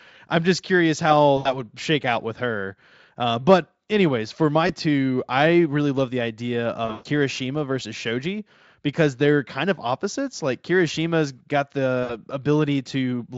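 In this speech clip the sound briefly smears into a buzzy tone or a fading coloured noise at 1.37–1.59 s after "I'm just curious how", 4.67–4.73 s after "but anyways for my", 6.85–7.07 s after "really love the idea", and 12.03–12.15 s. This is VoIP packet loss concealed by the speech codec, which stretched the last sound to cover missing audio of 80 ms, 20 ms, 180 ms and 60 ms.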